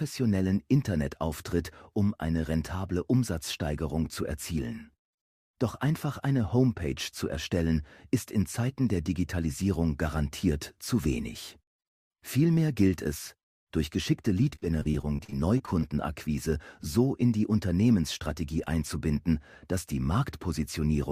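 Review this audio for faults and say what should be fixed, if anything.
From 14.55 to 15.84 s the audio turns choppy: repeated packet loss (robotic sound). About a dozen short holes fall in this 1.3 s stretch, none longer than about 37 ms, and each is patched by stretching the last bit of sound, so roughly a fifth of the span is filler. On a spectrogram this shows as smeared, repeated vertical slices; the waveform shows repeated near-identical cycles and abrupt joins. Prevent it with a larger jitter buffer and forward error correction on the network path.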